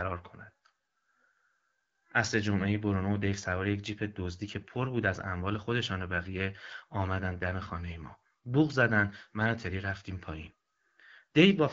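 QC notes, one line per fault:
No faults heard in this speech clip.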